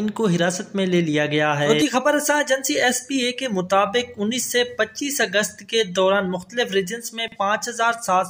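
At 7.28 s the audio briefly jumbles. This is chunks out of order. Two 40 ms chunks swap places between 7.28 and 7.36 s. The second chunk plays first, and the one that should lead arrives one chunk late. No audio is missing. The order is simply wrong across that 80 ms span. The sound seems scrambled for an instant. Three hard joins sit at the chunk edges within the span.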